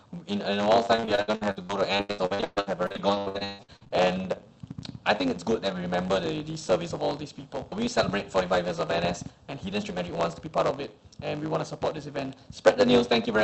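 From the very start and for the whole clip there is a block size mismatch (truncated). One stage writes longer blocks than the next one reads, so the tail of every block is dropped. The result is a steady 100 Hz buzz from the regular splices, and the audio runs about 1.07 times fast while staying at roughly its normal pitch, which fits 512-sample written blocks. On a spectrogram this appears as vertical seams every 10 ms with harmonics stacked at 100 Hz multiples. In the waveform, small discontinuities repeat at that same interval.

From 0.95 s to 3.92 s there is repeated packet loss (robotic sound). Around thirty holes open in quick succession, the longest about 143 ms. Each is filled by stretching the last bit of sound, so roughly 45% of that stretch is concealment rather than real audio. It sounds choppy, with pieces missing. A spectrogram shows smeared, repeated frames and flat, buzzy harmonic bands in place of normal detail. 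The waveform shows looped segments and abrupt level jumps. Across the whole clip, the content above about 8 kHz is cut off, as expected from the Opus call path.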